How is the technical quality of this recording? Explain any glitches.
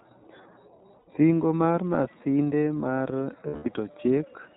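The technical quality is limited by an audible codec and two short dropouts.

iLBC codec, throughout: the speech is narrowband, cut off above 4 kHz. It sounds slightly rough and synthetic, which fits iLBC's 30 ms frame mode.

Lost iLBC frames, from 0.99 to 1.08 s and from 3.48 to 3.67 s: packets went missing. The decoder repeated the last pitch cycle with noise, so each gap sounds like a held, buzzy vowel. The first gap lasts 90 ms and the second 180 ms. Both recover almost at once.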